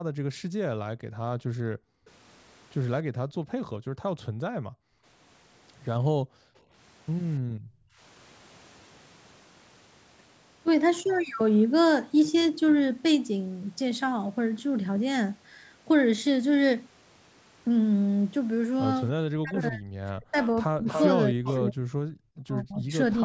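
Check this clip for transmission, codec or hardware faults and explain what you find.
The clip has three kinds of echo-canceller fault, clustered at the start and near the end. Its band stops around 8 kHz, as expected from call microphone processing.

Speech suppressed in double talk: at 0.0 to 0.09 s, and again from 19.33 to 22.92 s for about two seconds in total, the speech dips by up to about 40 dB. The likely cause is the canceller turning the talker down while the far side also spoke.

Background gated by the echo canceller: from 0.37 to 2.06 s, 3.03 to 5.04 s and 6.16 to 8.0 s, the room sound drops by up to about 40 dB, then returns. The canceller clamps the microphone hard while loudspeaker playback is present, and releases it afterwards.

Echo leak: from 19.54 to 22.39 s a second copy of the speech trails the original by 287 ms, only a few decibels quieter. This is likely loudspeaker sound reaching the microphone and passing the canceller incompletely removed, so it was sent back.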